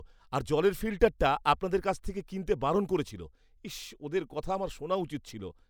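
No technical faults are audible in this speech recording. There is no moment in it that needs a timestamp or any further comment.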